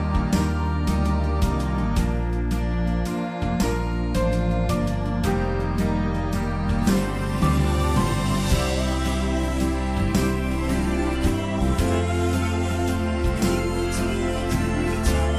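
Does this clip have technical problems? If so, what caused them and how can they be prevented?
No, nothing stood out as a technical problem on listening, so there is nothing here that calls for prevention.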